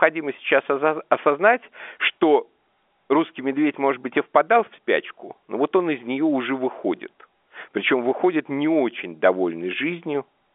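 No technical faults present.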